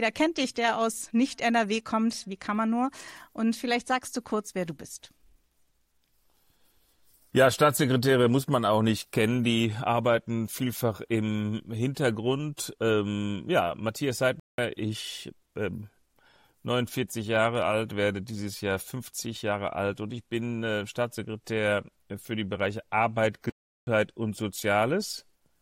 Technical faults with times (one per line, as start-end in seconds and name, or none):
14.40-14.58 block of digital silence
23.50-23.87 block of digital silence